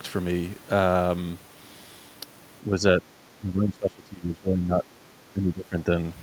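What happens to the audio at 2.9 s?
An echo canceller likely mistook overlapping talk for echo, causing speech suppressed in double talk from 2.65 to 3.04 s: brief dips of about 5 dB.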